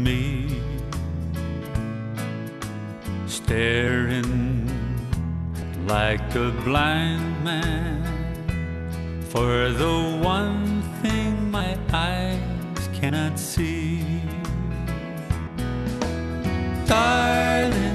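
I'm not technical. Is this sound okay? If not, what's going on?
No. The sound briefly jumps forward seven times: at 1.67, 3.87, 5.62, 11.60, 13.09, 15.47 and 17.64 seconds. These are compressed frames skipped. Small chunks of the file never play, each roughly a twentieth to a seventh of a second.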